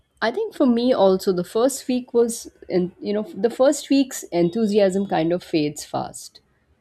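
Speech, with no technical faults heard anywhere in the recording.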